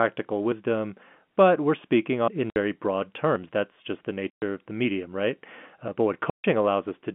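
A speech recording carried over a G.711 telephone line, with its narrow 150 Hz to 3.4 kHz band, has two kinds of fault. At 2.28 s, right after "but we're speaking", the sound jumps ahead by roughly a tenth of a second with no gap, most likely a dropped buffer (overrun). Hard-edged silent holes also appear at 2.50 to 2.56 s (60 ms), 4.30 to 4.42 s (120 ms, between "just the" and "of the medium right") and 6.30 to 6.44 s (140 ms). These are packet loss filled with silence, and the lengths fit 20 ms packets.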